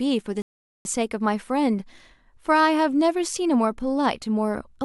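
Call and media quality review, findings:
Rebuffering stall, speech, 0.42 to 0.85 s. Playback drops to silence for 0.43 s, then resumes at the exact cut point. No audio skipped, only delay added. Probable component: client player buffer. Mechanism: downloaded audio exhausted before the next segment arrived, so playback halted until data refilled the buffer. Points to network delivery falling behind playback rate.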